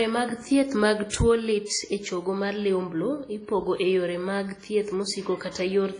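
A speech recording with heavy transform-codec damage throughout: the band is empty above 10.1 kHz, and the sound is washy and ringing, with a hiss that rises and falls with the level, most likely WMA compression at a low bitrate, consistent with roughly 24 kbps. At 1.10 to 1.13 s there is pre-echo: an attack is preceded by about 37 ms of hiss, because quantisation noise sized for the loud onset is spread across the quiet part of the block before it, smearing the attack.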